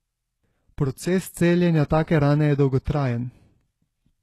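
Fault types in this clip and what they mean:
HE-AAC compression: Throughout the speech, the treble sounds gritty and synthetic, likely from HE-AAC at a very low bitrate near 16 kbps, with nothing above about 12.3 kHz. Only the lower spectrum is coded properly, and the upper bands are rebuilt from copies of it.
pre-echo: At 2.85 s, a hiss of about 18 ms runs just ahead of a sharp onset and softens its attack. The codec spread quantisation noise across its whole block, so noise sized for the loud attack leaked into the quiet moment before it.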